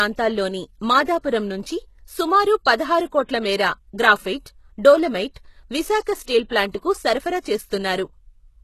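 From start to finish the speech carries plainly audible codec damage, likely HE-AAC compression at a very low bitrate, around 16 kbps. Only the lower band is truly coded; the treble is rebuilt by copying lower bands upward, so s sounds come out gritty and metallic, and nothing remains above 12.3 kHz. Unlike a simple low-pass, the top still carries treble, but its harmonics fail to line up with the body of the sound.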